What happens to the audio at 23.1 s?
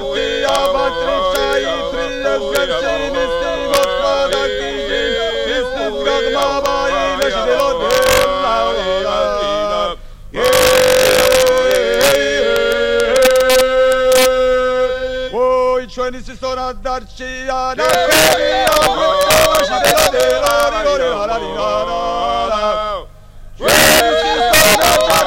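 Integer overflow runs through the whole clip, 23.1 s included: peaks driven about 4 dB too hot wrap to the opposite sign, giving sharp cracks on the few loudest samples.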